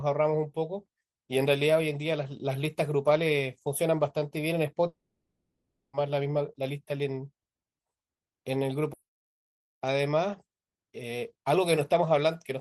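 Speech, hit by a likely long network dropout from 4.87 to 5.95 s: the sound trails off as a fading buzz or hiss, goes silent, then resumes about 1.06 s further on.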